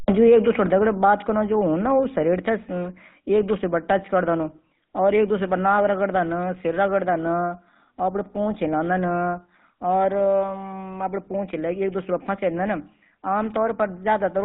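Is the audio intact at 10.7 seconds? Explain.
No. At 10.7 seconds the speech is passing through the GSM full-rate codec, which affects the whole clip rather than just that moment. The codec models the vocal tract and drives it with a regularly spaced pulse excitation that keeps only a third of the samples. At around 13 kbps it discards everything above 4 kHz. The damage is plainly audible: the voice sounds dull and band-limited, with a buzzy, gravelly roughness running through it.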